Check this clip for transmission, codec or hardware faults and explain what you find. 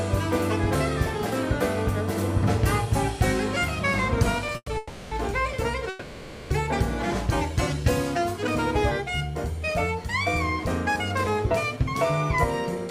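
The clip has a cluster of transmission faults between about 4.5 and 6.5 s, all caused by late-arriving packets, and a brief catch-up later on.

At 4.52 to 4.56 s the sound is held for about 20 ms too long, with a faint buzzy sustain before it moves on. This is a short stall from a late packet. A packet wasn't there when its turn came, so the jitter buffer ran dry. The receiver stretched the last bit of audio until the packet arrived, then resumed from the same point. Nothing is lost, but playback now runs about 20 ms later.

Right after that come three call audio freezes, at 4.56 to 4.69 s, 4.77 to 5.13 s and 5.89 to 6.52 s. In each, the sound hangs on as a fading buzz. The first one falls to about 40 ms of silence before the audio returns. The next two are longer, at about 340 ms and 610 ms, and carry the held sound throughout. Each time, the audio resumes where it left off. The likely cause is packets held up on the network, which emptied the jitter buffer while the receiver filled the wait with synthetic continuation. 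Together with the first stall, these freezes add roughly 1.1 s of delay.

From 10.94 to 11.77 s the sound runs about 5% fast, at 105% speed, while the pitch stays the same, so it comes across as slightly hurried. This is a jitter buffer speed-up. The buffer was holding more audio than it aims for, so the receiver cut out tiny pitch-period slices again and again to trim the delay. In total it removed about 50 ms.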